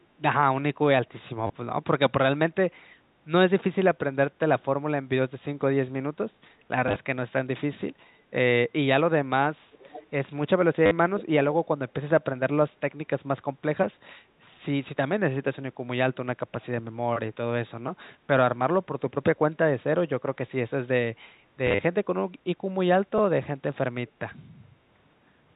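Short robotic stutters come at 1.47 to 1.50 s (30 ms lost) and 6.88 to 6.96 s (50 ms lost in bursts, longest 30 ms). This is packet loss with the last packet repeated: the receiver replayed stale audio out of step with the pitch, and the stutter timing fits 10 ms packets. A faint, delayed second copy of the speech, about 20 dB below it and trailing by about 0.47 s, is heard from 9.72 to 10.07 s. It is an echo leak, most likely a loudspeaker's echo canceller letting some of its own output back into the microphone. The same repeated-packet stutter returns at 10.86 to 10.91 s (50 ms), at 21.67 to 21.79 s (80 ms lost in scattered bursts, longest 40 ms), and as a single small blip at 23.18 s, all over the narrowband G.711 telephone coding.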